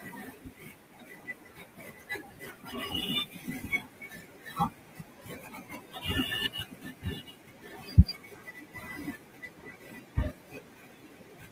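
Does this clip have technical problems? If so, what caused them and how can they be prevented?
Yes. The noise suppressor mistook the speech for background noise, cutting it by up to about 18 to 19 dB from 0.0 to 3.08 s, 3.24 to 6.08 s and 6.48 to 11.51 s, so the speech sounds swallowed and faint almost throughout. Since the room noise already sits about 22 dB below the speech, a gentler suppression setting would prevent this speech cut by the noise suppressor.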